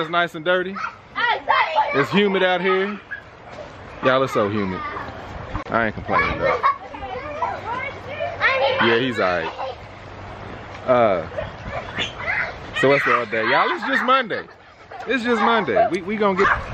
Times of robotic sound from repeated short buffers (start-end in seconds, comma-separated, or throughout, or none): none